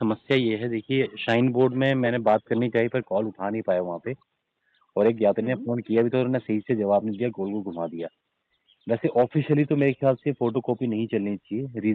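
No technical faults are audible in this audio.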